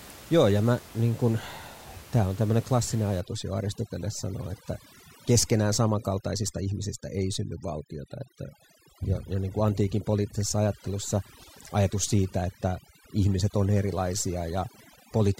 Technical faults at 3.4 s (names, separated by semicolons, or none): overdone noise removal